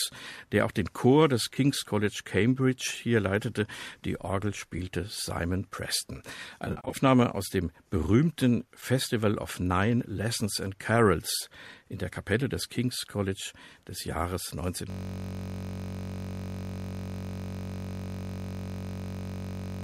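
AAC frame loss with concealment strikes first at 1.54 to 1.57 s, where about 20 ms of coded audio goes missing and the decoder patches the gap from the preceding spectrum, leaving a brief smeared, noisy blip. A single shorter dropout of about 10 ms follows at 4.78 s. From 6.65 to 6.97 s the losses cluster, about 190 ms missing across 280 ms with the longest run around 50 ms, so the patched stretches turn phasey and grainy in quick succession.

At 14.90 s a system hang loop sets in and lasts to the end: the machine stalls while the audio hardware keeps replaying one 21.33 ms buffer, which fits a 1024-sample buffer at 48 kHz. That single fragment repeats at 46.9 Hz, so the sound collapses into a steady, pitched buzz.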